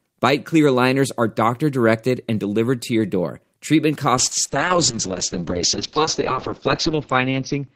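A speech recording with a call bitrate drop starting at 4.19 s and lasting to the end. From that point the audio turns rough and muffled. The top end disappears, with the audible bandwidth narrowing from 20 kHz to 6 kHz. The coarseness fits the encoder falling from roughly 32 kbps to about 7 kbps. The worst stretch holds for 2.76 s. A falling bandwidth estimate in the call forced this coarser coding, and it never recovers.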